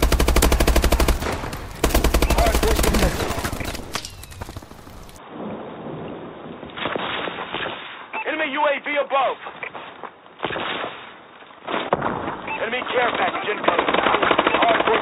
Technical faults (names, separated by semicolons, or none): input switched to a poorer device